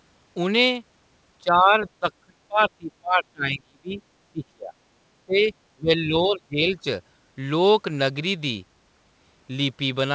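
From 1.42 to 4.01 s, 4.28 to 4.75 s, 5.26 to 5.52 s and 5.74 to 6.85 s, the speech dips by roughly 20 to 30 dB or drops out in fragments. This is likely speech suppressed in double talk, with the echo canceller ducking the near talker. The waveform shows hollowed stretches, and the spectrogram thins and goes dark there.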